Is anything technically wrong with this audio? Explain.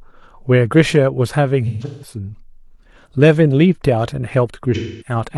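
Yes, there's AAC frame loss with concealment in this speech. From 1.67 to 2.16 s, about 0.3 s drops out in scattered gaps, the longest around 150 ms. From 4.74 to 5.15 s, about 0.26 s goes missing. Each time the decoder rebuilds the gaps from the last good spectrum, so those stretches come out smeared, noisy or phasey.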